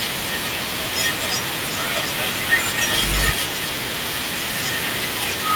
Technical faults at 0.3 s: none

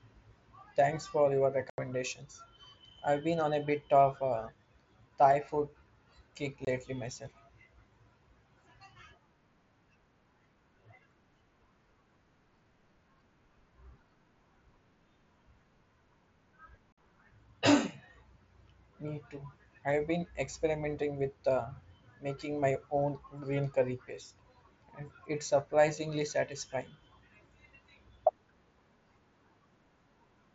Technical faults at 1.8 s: unconcealed Bluetooth headset packet loss

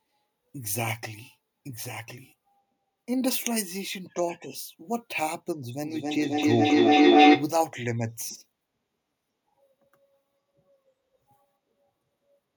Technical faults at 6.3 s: feedback echo between two devices

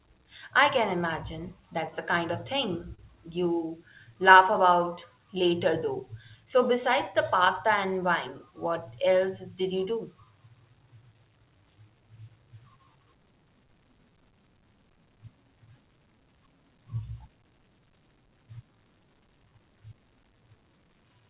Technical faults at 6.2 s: clock drift between sender and receiver; repeated timing corrections

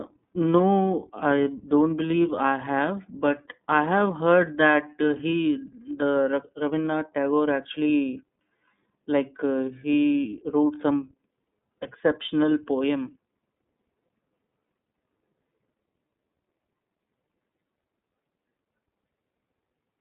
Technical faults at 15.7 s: iLBC codec

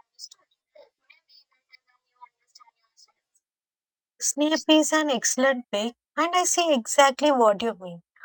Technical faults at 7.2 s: imaging from linear upsampling

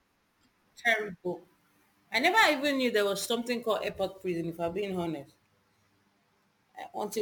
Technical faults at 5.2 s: crude rate conversion

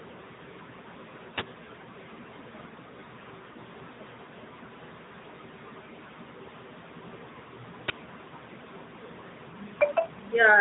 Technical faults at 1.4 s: AMR narrowband mobile codec; uninitialised buffer

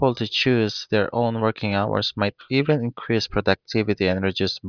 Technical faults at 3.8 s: none

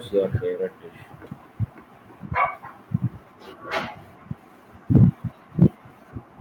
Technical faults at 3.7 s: none

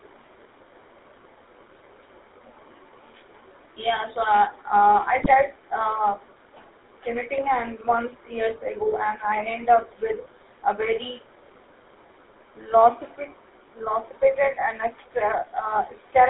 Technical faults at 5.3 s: GSM full-rate codec; GSM bit errors

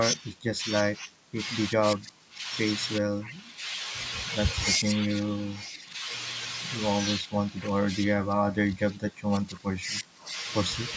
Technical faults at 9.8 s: none

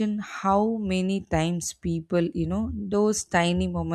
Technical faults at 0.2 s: none

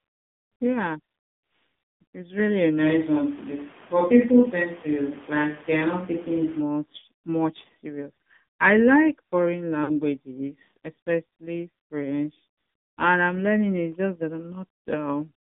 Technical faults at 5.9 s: AMR narrowband mobile codec; switch to a distant microphone

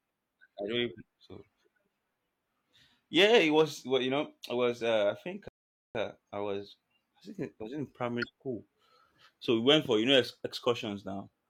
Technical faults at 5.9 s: rebuffering stall

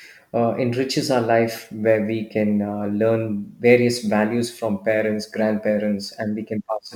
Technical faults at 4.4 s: sample clock jitter

